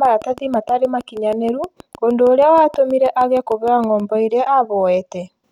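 A speech recording carries a train of clicks from 0.05 s to 4.01 s: around thirty sharp ticks at a steady 6.34 per second, each peaking roughly as loud as the voice and audible through pauses too. The evenly spaced pulses most likely come from interference from nearby equipment or a faulty connection or power supply. A spectrogram would show thin vertical broadband lines at regular intervals, and the waveform a comb of near-identical spikes reaching about the level of the speech envelope.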